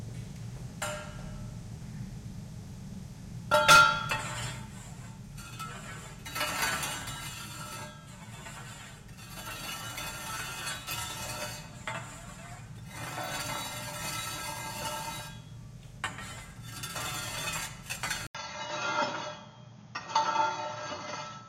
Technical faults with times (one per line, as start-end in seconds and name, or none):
18.27-21.49 input switched to a poorer device